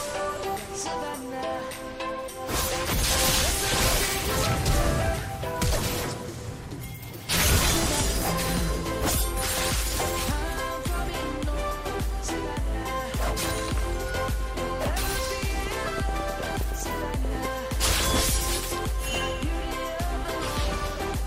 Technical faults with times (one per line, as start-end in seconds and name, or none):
15.67-17.46 train of clicks